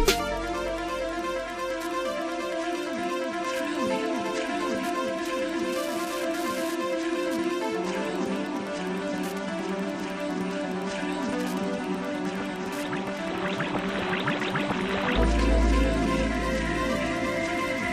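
A nearby Wi-Fi radio is coupling into the audio circuit, which rectifies its beacon transmissions every 102.4 ms. Throughout the clip this Wi-Fi interference is heard as a steady ticking about ten times a second, sitting well below the main sound.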